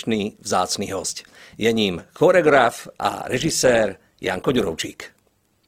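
At 2.46 s the speech switches abruptly to an adaptive stream at a lower bitrate, with no gap. Codec artefacts rise through the end, consistent with Opus falling from 64 to 16 kbit/s.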